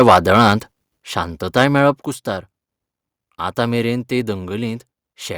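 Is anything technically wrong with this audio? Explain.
Yes. From the start to 0.51 s the loudest speech peaks break into a harsh, crackly edge, most likely microphone overload: input driven roughly 6 dB past the converter's ceiling, so around 2 percent of samples have their tops sheared flat. Unlike codec distortion, the grit tracks only the loudest syllables.

At 1.02 s and again at 2.04 s, voice and background drop together by about 7 dB and then about 5 dB. This is likely the microphone volume stepped down by call software reacting to the earlier clipping. The drops are instant steps, not a compressor's gradual pumping.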